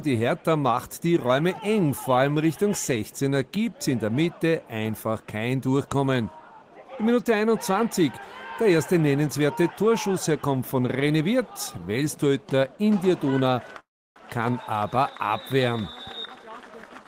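At 13.79 s the audio stalls into a brief fading buzz and then silence until 14.18 s before carrying on with nothing lost, likely a call audio freeze from held-up packets. From 15.83 s to the end, the audio runs hurried at unchanged pitch, about 120% speed, as jitter buffer speed-up trims roughly a third of a second of pitch periods.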